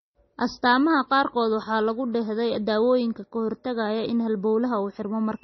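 Likely MP3 compression at a very low bitrate, running throughout the speech. Short of bits, the encoder has removed everything above 5.9 kHz and thrown away weak frequency lines, which then flicker in and out from frame to frame. The damage is heavy, consistent with something like 24 kbps: the speech sounds dull and muffled without its upper treble, s sounds turn metallic and chirpy, a watery, swirling texture hangs on the sound, and consonant onsets come out smeared.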